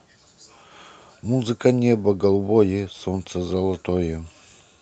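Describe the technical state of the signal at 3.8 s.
At 3.8 s the speech is intact, carried cleanly through the WebRTC call path with no fault at that moment.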